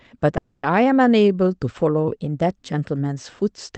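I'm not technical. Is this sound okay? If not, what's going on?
No, there are two problems.

At 0.37 s the sound stops moving forward for about a quarter of a second, until 0.66 s. The last bit of sound hangs on as a short fading buzz. Then the audio picks up exactly where it left off. Nothing is lost, but everything after that point arrives about 260 ms late. This is a call audio freeze. The likely cause is data getting held up on the way, so the call's waiting buffer ran dry.

From 2.12 s to 2.91 s the sound suddenly plays faster and higher, then snaps back to normal. The speed goes up by about 5.7 percent. The pitch rises by almost a semitone. The speech sounds briefly hurried and out of tune. This is a drift correction step. Two devices' clocks had drifted apart. Software then likely changed the playback speed in one jump to catch up.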